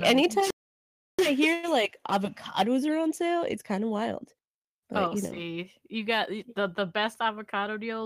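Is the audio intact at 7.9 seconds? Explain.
No. Right after "got the the best", from 7.21 s to the end at 8.05 s, there's a jitter buffer speed-up. The receiver had too much audio queued and kept snipping out pitch-period-sized pieces, so the speech runs about 7% fast at unchanged pitch and sounds a bit rushed.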